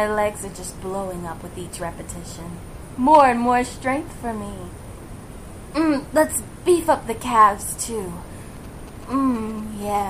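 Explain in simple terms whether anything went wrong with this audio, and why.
A mobile phone on the older 2G network was close to the recording equipment and sent short groups of radio bursts while signalling with the network. The audio circuitry picked up those bursts and turned them into sound. From 8.57 to 9.84 s this shows up as GSM signalling bursts: a galloping dit-dit-dit of short buzzes, pulsing about 217 times a second. The buzz sits fairly quietly underneath the main sound.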